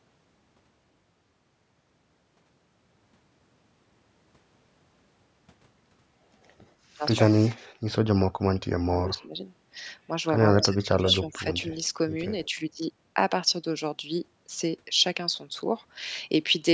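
A speech recording whose spectrogram ends at 8 kHz, as expected from normal call microphone processing, shows speech suppressed in double talk three times: 8.88 to 9.34 s, 10.65 to 11.01 s and 11.19 to 11.46 s. The voice dips in pieces, by about 20 dB, then about 25 dB, then only about 5 dB, over a few hundred milliseconds in total. The likely cause is an echo canceller that turned the talker down along with the far side's echo while both spoke. On a waveform these appear as sudden notches in the envelope, and on a spectrogram as brief vertical gaps where energy thins. Echo leak appears at 10.62 to 10.66 s and again at 10.99 to 11.14 s. A faint copy of the voice returns about 131 ms late, first about 20 dB and then about 15 dB below the speech, heard as short scraps. The likely cause is a loudspeaker path whose echo canceller let residual pickup through. A spectrogram would show the same harmonic pattern repeated faintly, shifted 131 ms to the right, interleaved with the suppression gaps.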